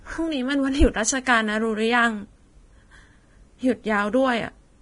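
Throughout, likely heavy Vorbis compression, fitting about 29 kbps, removes everything above 10.6 kHz, leaving the speech's treble hissy and grainy.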